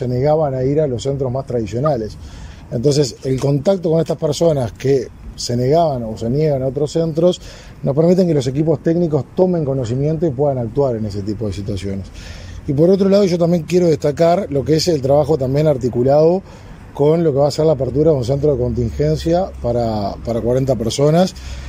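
Two short bursts of corrupt frame decoded occur in this audio, at 1.86 to 1.88 s and 17.87 to 17.91 s. Each is a brief glitch where damaged compressed data was played anyway, so misread gains and codes put energy at the wrong frequencies for a few frames. Both peak fairly loud, around -10 dBFS. A spectrogram would show a narrow vertical smear of misplaced energy at each time, and the waveform a sudden spike unrelated to its surroundings.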